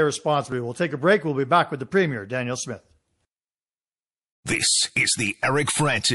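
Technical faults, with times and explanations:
Throughout, MP3 compression: the speech sounds watery and swirly, with metallic chirps on s sounds and smeared attacks. This is likely lossy encoding at a low bitrate, around 48 kbps, where weak frequency lines drop in and out between frames.
5.65 to 5.67 s, pre-echo: a short hiss, about 11 dB above its surroundings, creeps in just ahead of a sharp attack, which sounds softened. The codec spread its noise over a long block of about 48 ms without switching to short blocks, so noise leaked before the attack.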